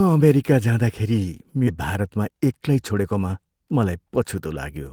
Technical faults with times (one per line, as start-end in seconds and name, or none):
1.67-1.69 skip ahead
2.01-3.01 jitter buffer speed-up